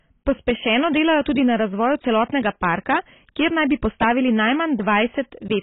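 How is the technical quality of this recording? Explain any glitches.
Not great: two problems run through the whole clip.

Hard clipping, start to finish: the speech was driven about 10 dB past what the chain could pass, so a few percent of the samples hit the ceiling and were flattened. Those squared-off peaks throw extra harmonics high up, which you hear as crackle and fuzz on the louder syllables.

Heavy codec damage, also throughout: nothing comes through above 3.8 kHz, so the speech sounds dull and smeared, with a warbly texture. The likely cause is AAC compression, and the low cut-off and coarse quantisation fit a bitrate around 16 kbps.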